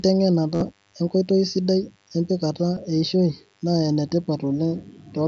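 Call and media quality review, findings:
DECT cordless phone buzz, whole clip: thin steady 100 Hz buzz with a stack of harmonics, faint, about 40 dB under the speech. Probable source is a DECT handset or base nearby; its 10 ms radio bursts get rectified in the audio front end.

Concealed Bluetooth headset packet loss, 0.54–0.62 s: buzzy held tone at full level, slight warble as real audio resumes. About 60 ms lost over 75 ms, longest gap 45 ms, fits a run of dropped headset frames.

Same again at 2.75 s: two lost frames, 15 ms in all. Receiver is looping the best-matching bit of the last ~20 ms; mSBC wideband path itself shows only light grain.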